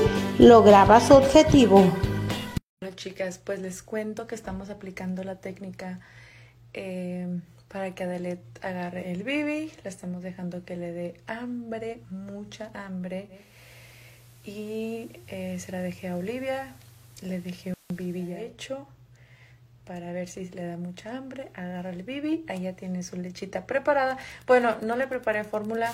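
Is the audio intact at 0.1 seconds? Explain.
Yes, at 0.1 seconds the audio is intact, with nothing there that can be heard as a fault.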